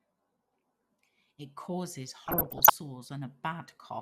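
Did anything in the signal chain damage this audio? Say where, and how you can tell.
Yes. DAB burbling damages the speech from 2.24 to 2.74 s, at the decoding stage of weak broadcast reception. Residual bit errors corrupt MP2 sub-band samples and scale factors, giving short noise blips in single sub-bands and level jumps lasting up to a frame. A spectrogram shows isolated frequency bands flaring frame by frame, consistent with a bit error rate of roughly one to two percent.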